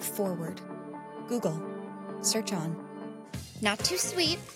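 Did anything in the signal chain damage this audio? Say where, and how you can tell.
Yes. A switching supply whistle runs through the whole clip, so the damage is in the analogue stage, at the power feeding the electronics. A faint high tone sits around 10 kHz, some 45 dB below the sound. Its pitch wanders between about 9.07 and 9.9 kHz. A switching regulator has dropped into an audible burst mode or is beating against another supply. Its ripple leaks into the audio path as a whistle that shifts with load.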